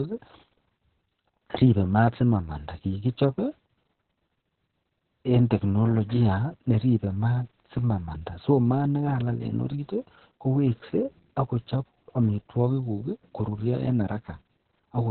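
From start to finish the speech carries heavy Opus voice compression: nothing survives above about 4.2 kHz, and the SILK coder's coarse excitation adds a hoarse, slightly robotic grain, which fits a very low bitrate near 6 kbps. That grain separates it from a plain low-pass filter.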